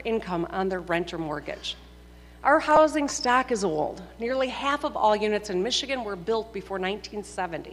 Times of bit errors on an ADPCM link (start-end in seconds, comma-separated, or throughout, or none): none